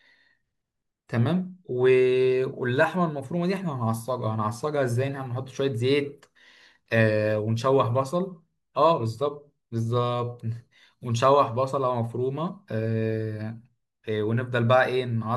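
No technical faults can be heard anywhere in the recording.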